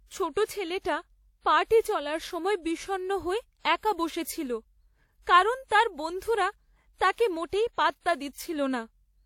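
Throughout the speech, two distinct sets of compression artefacts are heard together, the signature of transcoding between lossy codecs: a first encode, likely something like WMA at 64 kbit/s, later re-encoded as HE-AAC near 40 kbit/s. The swirly, metallic upper band of spectral band replication sits on top of older smearing and pre-echo. A spectrogram shows a hard ceiling from the lower cut-off, with blocky holes below it.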